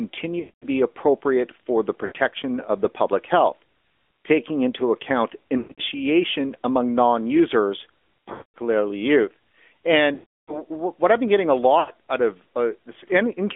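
AMR narrowband mobile codec, throughout: the speech is confined to roughly 250 Hz to 3.5 kHz and carries a buzzy, synthetic edge from the pulse-driven vocal tract model. The plainly audible damage fits the 10.2 kbps mode.

Lost AMR speech frames at 0.40–0.65 s (before "be appropriate for the"), 2.06–2.13 s, 5.58–5.80 s (scattered, longest run 120 ms), 8.32–8.58 s (after "among non users"), 10.14–10.64 s (before "what I've been getting") and 11.80–11.90 s. The decoder repeats its last good settings at falling gain, so the sound smears, fades out, then returns rough.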